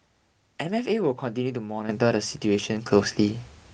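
At 1.89 s the level jumps abruptly by about 9 dB, and at 2.91 s it jumps again by about 6 dB: the microphone volume stepped up twice as the call software judged the input too quiet and raised the device gain in single steps. Speech and background noise rise together and stay up. That sets it apart from compressor or automatic gain pumping, which ramps smoothly and relaxes back down afterwards.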